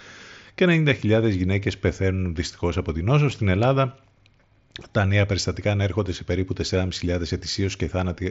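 Concealed Bluetooth headset packet loss occurs at 3.30 s, right after "δυστυχώς από την νόσο". A single short packet, about 7.5 ms of audio, went missing on the headset link. The receiver filled it by repeating the best-matching recent stretch of waveform, so the gap is almost inaudible. The wideband mSBC headset link carrying the speech adds only a light grain.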